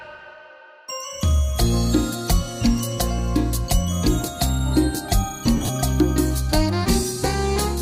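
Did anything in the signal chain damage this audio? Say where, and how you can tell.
Yes. Lost LE Audio frames on the Bluetooth link, 5.57 to 5.69 s. About 80 ms dropped in short gaps. The LC3 decoder's concealment smears those gaps into noise.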